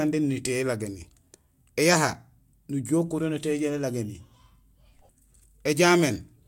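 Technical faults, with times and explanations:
No technical faults can be heard in this speech clip.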